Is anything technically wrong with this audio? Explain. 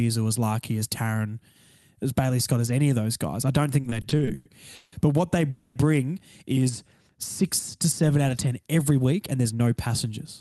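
Yes, there are three call-network faults.

From 3.81 to 4.94 s, just after "those guys I don't", the speech drags and stutters through eight brief holds, the longest 170 ms. These are repeated stalls (stutter): packets arrived late, the jitter buffer kept emptying, and the receiver stretched the last sound for 390 ms in total, about a third of that stretch, with nothing lost.

From 5.50 to 5.77 s, right after "what they", the sound hangs as a fading buzz or hiss for 250 ms rather than dropping to silence. This is a call audio freeze, likely caused by held-up packets draining the buffer. Playback then resumes where it stopped, 250 ms later.

From 8.90 to 10.25 s the speech sounds hurried, running at 108% speed with unchanged pitch. This is a jitter buffer speed-up: the receiver trimmed about a tenth of a second of pitch-period slices to shrink excess buffered delay.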